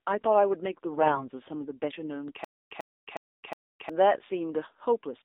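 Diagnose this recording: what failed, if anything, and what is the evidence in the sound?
The whole clip went through the AMR narrowband mobile codec, and at a low rate, around 7.4 kbps judging by how buzzy and synthetic the speech sounds. The band is squeezed to roughly 300 Hz to 3.7 kHz, so there's nothing up top and not much low end. That's the codec stage: a vocal-tract model excited by a handful of pulses, and at this bitrate the approximation is plainly audible throughout.

Between 0.93 and 1.29 s you get AMR bit errors on top of that. The pitch and level hold roughly steady, but the speech goes hoarse, scratchy and gargly for about a third of a second, which fits around a dozen 20 ms frames arriving damaged. That points to the network or radio link: a few percent of the weakly protected bits flipped, so the excitation pulses and fine spectral values decoded wrong while the frames still passed their checks.

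From 2.44 to 3.89 s there's a stutter with silent gaps. A 100 ms fragment repeats at an even 363 ms pace, with about 262 ms of digital silence after each of the four repeats, and whatever audio belonged in that window is simply gone. The likely cause is at playback or the stream buffer: it stalled, replayed its last fragment on each retry, then ran dry.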